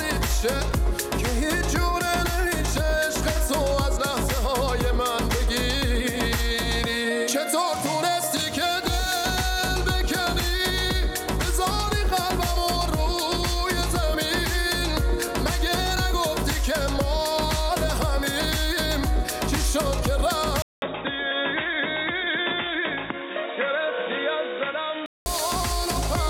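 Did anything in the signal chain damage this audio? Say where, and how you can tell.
Yes. At 20.62 s the audio drops out for about 200 ms, then returns dull and boxy, with nothing above 3.8 kHz, a few dB quieter, and over a new background noise roughly 40 dB down. It clears again at 25.26 s. That points to the input stage, likely an input switched to a poorer device. A codec bandwidth cut would narrow the band without the gap, the level step or the fresh noise floor.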